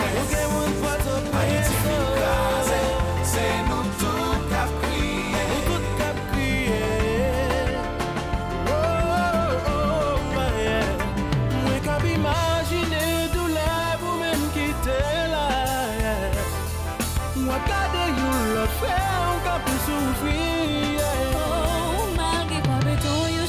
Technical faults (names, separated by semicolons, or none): none